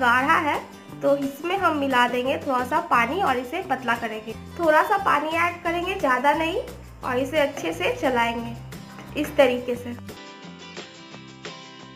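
At 10.17 s the recording input was likely switched to a poorer device, which runs to the end of the audio. The new path passes nothing above 7.6 kHz, so the sound turns abruptly duller, shifts in level by roughly 5 dB and gains a faint new noise floor, with no gap at the switch.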